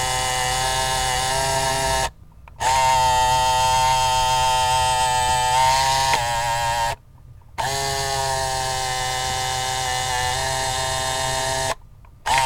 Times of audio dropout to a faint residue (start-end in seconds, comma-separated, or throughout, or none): none